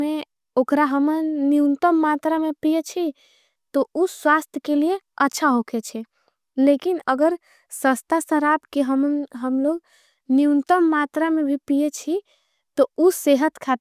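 No technical faults can be heard anywhere in the speech; the signal stays continuous and stable throughout.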